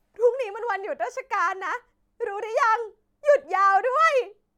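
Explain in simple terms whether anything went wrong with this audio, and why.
Nothing went wrong here: the speech comes through without any dropouts, glitches or other technical problems to point to.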